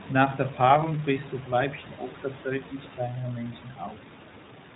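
Throughout, iLBC codec coding removes everything above 4 kHz and leaves the speech plainly rough and synthetic, which fits independently coded 20 ms frames at 15.2 kbps.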